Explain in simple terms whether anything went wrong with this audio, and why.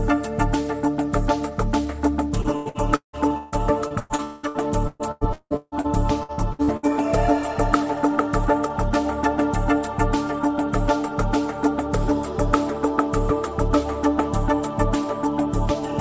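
From 2.42 to 5.87 s, and again from 6.23 to 6.86 s, the audio has repeated packet loss (robotic sound): pieces keep going missing, up to about 0.19 s each, and each hole is filled by stretching the last sound. That choppy pattern is what separates it from a single clean dropout.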